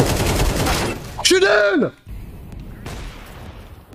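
A stepped level drop, heard as zipper noise, runs from 0.76 to 2.16 s. The sound falls by roughly 10 dB, not as a continuous slope but in coarse 3 dB jumps, about three a second. Each jump lands without smoothing and leaves a small click, so a ticking rides on the sound while it fades. A properly smoothed fade would glide down silently, with no discrete clicks marking its progress.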